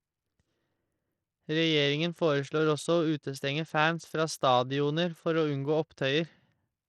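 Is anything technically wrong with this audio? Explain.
Yes. Throughout the speech, a likely Bluetooth SBC compression link starves the upper sub-bands of bits, which fits a rate near 80 kbps, so the treble flickers out under plainly audible gritty, aliased noise.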